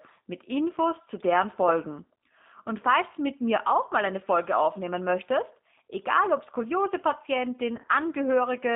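From start to finish the speech carries the sound of the G.729 codec, heard as a telephone band of roughly 200 Hz to 3.6 kHz with nothing above it. The coder rebuilds each short frame from a vocal tract filter, a pitch predictor and a few pulses, so the damage is plainly audible: consonants are dulled, and voiced sounds come out rough and slightly synthetic. The result fits 8 kbit/s G.729A.

Between 7.77 and 7.89 s there is VoIP packet loss concealed by the speech codec. About 60 ms of audio goes missing in short gaps scattered across that 120 ms span, none longer than about 20 ms, which points to a handful of lost 10 ms frames. The decoder fills each gap by extending its last pitch and filter at falling gain. The speech turns briefly stretched and weak, then takes a moment to recover after the losses end.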